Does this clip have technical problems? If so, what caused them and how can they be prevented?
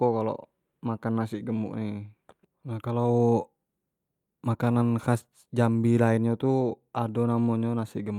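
No, this clip has no technical problems, so there is nothing that caused them and nothing to prevent.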